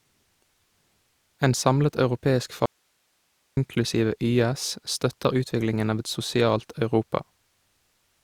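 After "samlet europeisk", speech snaps to hiss from 2.66 to 3.57 s: an audio dropout to a faint residue, likely signal loss, path still live.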